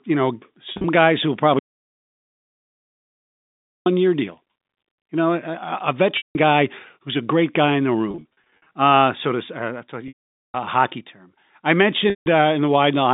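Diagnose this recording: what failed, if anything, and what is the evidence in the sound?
Network stage: packet loss with pitch repetition at 0.72–0.84 s, 6.17–6.35 s, 8.11–8.71 s (after "great guy in the"), 10.08–10.54 s (between "uh to" and "hockey term I") and 12.10–12.26 s. The receiver concealed lost packets, which fit 10 ms packets, by repeating the last pitch period. The short runs, up to 50 ms, sound held and buzzy. The 460 ms gap fades toward silence before a cross-fade back.

Audio dropout to silence from 1.59 to 3.86 s, about 2.3 s. The sound cuts off after "guys who will" and returns at "year deal". The gap is silent with no room tone, so the content in between is gone. The likely cause is an upstream input or link failure while the encoder kept writing silence. The G.711 telephone band is audible throughout.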